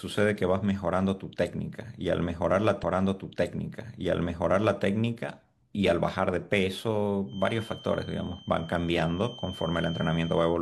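A stream segment repeated at 2.79 s: the speech jumps back and replays about 2.0 s of material, running to 4.79 s before carrying on. The player has fetched or queued the same chunk of the stream twice and played both copies back to back. A small blip marks the point where playback snaps back to the earlier position, and the listener then hears the same passage of speech over again.

A feedback whistle sets in at 7.25 s and lasts to the end of the clip, a thin, steady tone at 3.1 kHz that sits roughly 20 dB below the speech and swells and fades slowly in level. The likely cause is a loudspeaker-to-microphone loop poised just short of runaway feedback, so that this one frequency keeps sounding on its own without building into a full howl.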